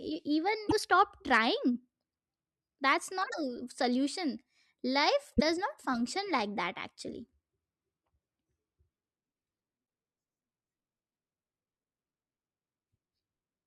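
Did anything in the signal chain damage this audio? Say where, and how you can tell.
Yes, at the codec: short glitches with a skip at 0.69–0.73, 3.30–3.34 and 5.37–5.42 s, likely a broken MP3 bit reservoir, where post-cut frames borrow the wrong bytes.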